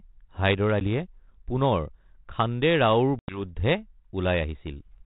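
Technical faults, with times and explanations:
0.80–0.82 s and 3.19–3.40 s, packet loss on an ADPCM call: two hard-edged dropouts to silence, a short one of about 10 ms, which sounds like a single packet gone, and a longer one of about 90 ms, roughly ten packets. The narrowband G.726 ADPCM coding (nothing above 4 kHz) builds each sample on the last, so after each hole the predictor and step size have drifted. The sound comes back with brief distortion before settling over a few tens of milliseconds.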